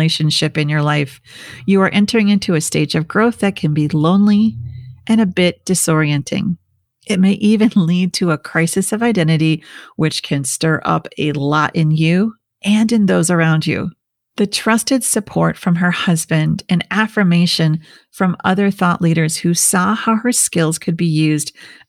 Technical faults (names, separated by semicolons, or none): none